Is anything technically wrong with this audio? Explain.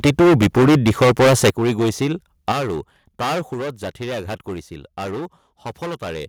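Yes. The speech carries three kinds of fault.

Hard clipping runs through the whole clip. The signal is driven about 19 dB past what a stage can pass, so roughly one sample in seven is cut flat. This is a harsh, buzzy fuzz on every loud sound, not occasional crackle, because the overload is large.

Microphone overload is heard from 0.03 to 1.5 s. The loudest syllables have a sharper, crackling edge, with nearly a third of samples flattened at about 8 dB over. The likely cause is input volume set too high at the converter.

Microphone volume stepped down occurs at 0.06, 1.5 and 2.52 s. Voice and background together drop suddenly, by about 2, 11 and 6 dB. The likely cause is call software lowering the device's input gain. These are instant steps, not gradual fades, and the largest follows the distorted opening.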